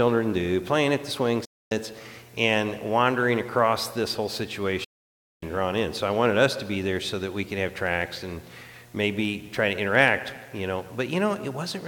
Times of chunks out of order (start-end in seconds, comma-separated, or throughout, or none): none